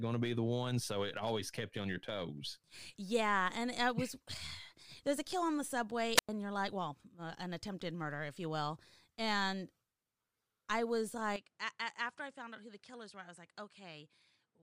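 At 6.15 s a wireless microphone squelch dropout occurs. The FM radio link fades, hiss rises briefly, and the receiver's squelch mutes the output for about 98 ms before the speech returns at 6.29 s. The rising static before the hole sets it apart from a clean digital packet gap.

From 11.36 s to the end the speech turns duller and about 10 dB quieter, with nothing above 11.1 kHz and a faint new noise floor well below the signal. The change is likely an input switched to a poorer device. There is no silence at the change, and tone, level and background noise all shift at the same instant. A gradual filter or gain change would not alter all three together.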